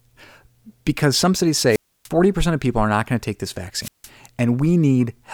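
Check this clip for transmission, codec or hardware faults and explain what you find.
Two wireless microphone squelch dropouts, at 1.68–2.09 s and 3.80–4.09 s. The FM radio link fades until the receiver's squelch mutes the output. Each is heard as a brief hiss, then near silence lasting 0.29 s and 0.16 s respectively, before the speech returns.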